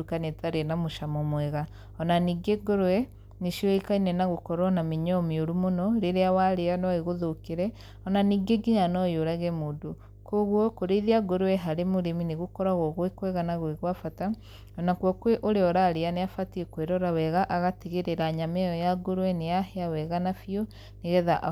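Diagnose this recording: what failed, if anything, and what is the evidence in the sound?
Mains hum in the analogue wiring: a steady 50 Hz tone with low harmonics runs under the speech throughout, roughly 20 dB down, from a ground loop or a nearby transformer coupling the power line in.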